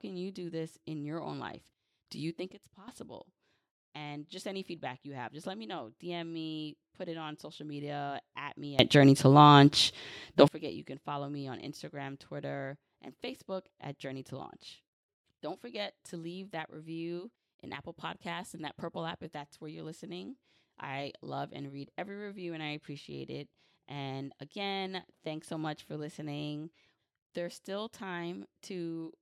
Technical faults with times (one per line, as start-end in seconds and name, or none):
2.53-2.88 sudden gain jump
8.79-10.48 sudden gain jump